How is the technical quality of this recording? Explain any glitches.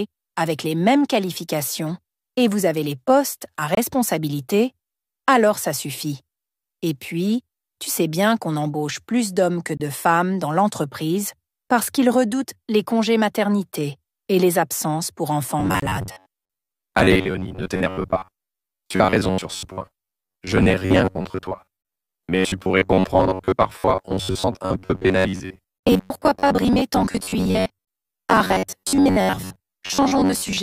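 The recording has two problems, and they overlap in the second half.

There's a gap between chunks at 3.75, 9.77, 15.80, 21.82 and 27.85 s. Each is a hard-edged hole of about 25 ms, spaced 6 s apart, which fits audio delivered in 6-second chunks with a bit of silence left at each join. Nothing's missing, just interrupted.

From 15.60 s to the end there's a robotic sound from repeated short buffers: a rigid, metallic buzz at about 94 Hz riding on the sound. The likely cause is the software looping roughly 10.7 ms snippets while fresh audio arrives too slowly, with about half the material being repeats.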